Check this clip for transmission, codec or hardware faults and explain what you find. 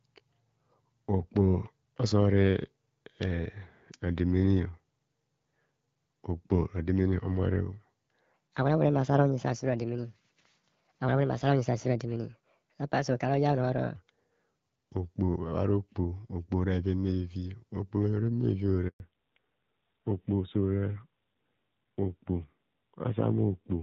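Three faults stand out in this speech: a stretch at the wrong speed, a handover gap, and a fallback to narrowband.

From 8.34 to 13.96 s there is a section at the wrong speed. It plays 1.36 times too fast. Pitch rises by about five semitones. The voice sounds high and hurried. This likely comes from playback or editing against the wrong clock, which shifts speed and pitch together.

From 18.88 to 19.00 s there is a handover gap. The voice fades within a few tens of milliseconds and the line goes silent for 120 ms. The call was switching networks, so no speech frames arrived. Whatever was said then is gone.

From 19.0 s to the end there is a fallback to narrowband. Before this, the call ran on the AMR wideband (HD Voice) codec. Its light coding sound fits 12.65 kbit/s. Afterwards nothing is heard above 4 kHz. The voice turns duller and rougher, which points to the 7.4 kbit/s narrowband AMR mode.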